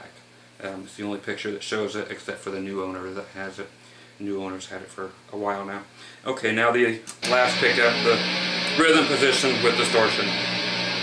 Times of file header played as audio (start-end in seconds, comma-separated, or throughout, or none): none